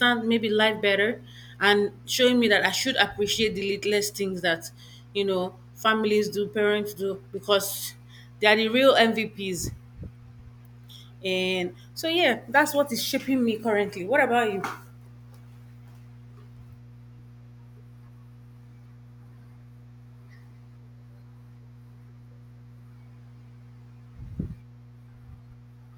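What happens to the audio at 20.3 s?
At 20.3 s the speech sits on top of a steady low drone, a mains hum at 60 Hz with some low harmonics above it, roughly 25 dB below the speech. The hum doesn't start or stop there; it runs through the whole clip. It comes from the power line leaking into the signal path, most often through a ground loop between connected equipment or from a transformer close to the cabling or microphone.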